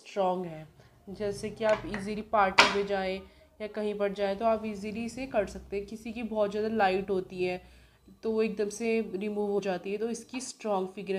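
At 9.58 s, compressed frames skipped: about two 26.1 ms frames never play, so the audio jumps ahead roughly 50 ms.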